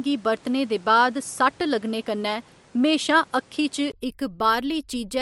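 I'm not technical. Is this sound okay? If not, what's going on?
No. Input switched to a poorer device, from the start until 3.94 s: the recording likely came through a weaker microphone at first, so the speech sounds duller and slightly boxy with faint background noise, then a tiny gap and a level jump as the better input takes over.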